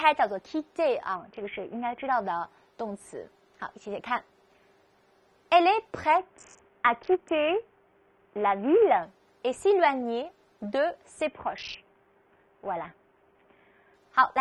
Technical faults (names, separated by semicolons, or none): Bluetooth SBC bit pool drop